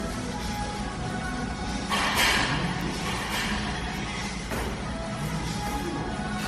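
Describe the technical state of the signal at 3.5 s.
At 3.5 s the sound likely carries a doubled audio track: a second, full-band copy, about a second late and roughly 10 dB quieter, repeats each event dryly without room colour.

Generation loss is present here too, likely from around fifteen successive MP3 encodes near 60 kbit/s, leaving swirly, hollow smearing, blurred attacks and nothing above 14.7 kHz.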